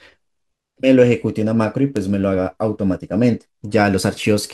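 At 1.97 s a bit error spike cuts through the speech as one sharp tick. A single flipped bit threw three consecutive samples off by a power of two, peaking at about -10 dBFS, before the waveform snapped back. The click is broadband and bears no relation to the voice. A second, quieter tick follows at 4.23 s. There two samples jump, reaching about -16 dBFS.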